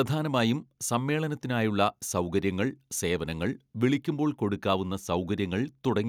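No technical faults can be heard anywhere in the recording.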